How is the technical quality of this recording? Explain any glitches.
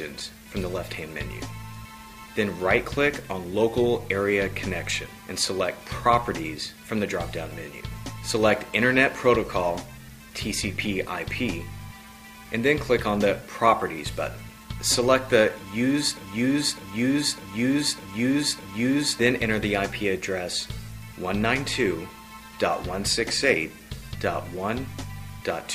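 There is one clear glitch. From 16.17 to 19.19 s a broken-record loop takes over: a fragment about 0.60 s long plays five times back to back, identical each time, so the sound sticks in a mechanical stutter for roughly three seconds. The likely cause is a stall in the player, encoder or stream, which kept resending the last chunk it held until data resumed. Whatever should have played during that stretch never arrives.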